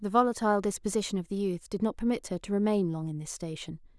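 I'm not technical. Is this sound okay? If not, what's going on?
Yes, this sound is okay; nothing is wrong.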